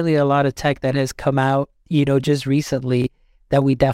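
Chunks out of order at 3.02–3.07 s: one 23 ms block of speech plays a chunk late, swapping places with its neighbour and leaving three hard joins, heard as a brief jumbled moment.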